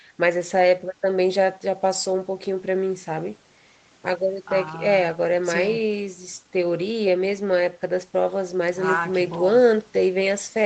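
No technical faults can be heard in the speech, which comes through an ordinary call path with nothing above about 8 kHz.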